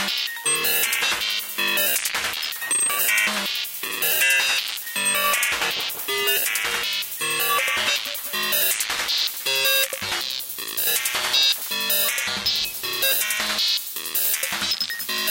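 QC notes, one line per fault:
No audible faults found in this recording.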